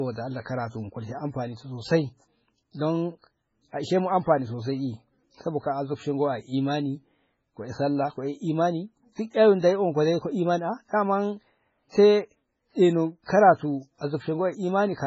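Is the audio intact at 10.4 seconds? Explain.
No. At 10.4 seconds, as throughout the whole speech clip, the sound is heavily damaged: nothing survives above 7.6 kHz, and the remaining detail has a watery, swirling quality, with sibilants turning into metallic chirps. The likely cause is MP3 compression at a very low bitrate, around 16 kbps. Starved of bits, the encoder drops the treble and zeroes weak frequency lines that flicker on and off between frames. A simple low-pass filter would make the speech dull but leave it steady, without this swirl.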